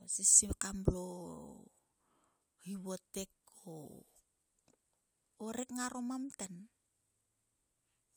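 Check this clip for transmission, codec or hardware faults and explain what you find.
No transmission, codec or hardware faults can be heard here.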